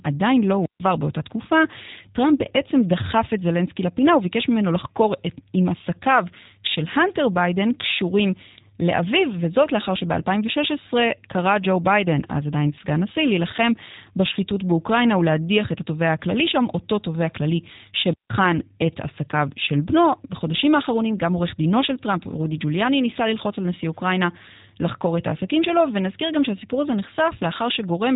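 Throughout, the speech sounds slightly rough and synthetic, with nothing above 3.8 kHz. This is G.729 codec damage: each frame is rebuilt from a vocal tract filter, pitch predictor and a few pulses, which fits 8 kbit/s.

From 0.61 to 0.80 s, hiss swells briefly, then the sound falls into a near-silent hole of about 143 ms. This is a wireless microphone squelch dropout: the FM radio signal faded and the receiver muted its output.

From 18.03 to 18.36 s, the same rise of hiss and mute recurs, this time lasting about 166 ms. It is another squelch dropout, with the signal fading until squelch cut the audio.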